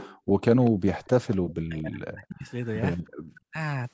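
At 0.0 to 0.17 s an echo leak likely occurs: the far end's echo canceller let loudspeaker pickup through, so a delayed copy of the speech arrives about 237 ms late, roughly 20 dB below the talker. It returns at 0.65 to 0.71 s, 1.04 to 1.53 s (fainter, around 25 dB down) and 2.98 to 3.4 s.

From 0.17 to 0.41 s the background is gated by the echo canceller, which clamped the microphone while its loudspeaker played. The room tone sinks by about 32 dB for a moment, then comes back. The same happens at 3.09 to 3.22 s, dropping by about 40 dB.

Between 1.64 and 2.48 s, speech is suppressed in double talk, likely because the canceller mistook overlapping talk for echo. The voice dips, cut by as much as 40 dB. A brief repeat hits at 3.5 to 3.57 s.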